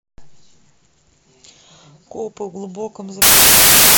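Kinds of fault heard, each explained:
Samples built from the wrong bytes: from 3.22 s to the end of the clip at about 4 s, the speech gives way to loud, harsh broadband noise. The reader pieces each sample's bytes together wrongly, either shifted by one byte, in swapped order, or on the wrong alignment, so the rapidly fluctuating low-order bits end up as the dominant part of every value. The result is harsh broadband noise for the rest of the clip.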